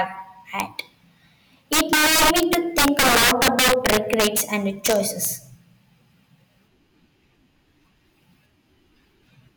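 Integer overflow in this speech clip first appears at 0.60 s as a single sharp crack, where a peak only just reaches the top of the integer range. It returns from 1.73 to 4.41 s with the signal driven about 10 dB over, and again from 4.86 to 5.25 s at about 7 dB over. Instead of being limited, each loud peak wraps around to the opposite sign and jumps across the full range, producing violent cracks far harsher than ordinary clipping.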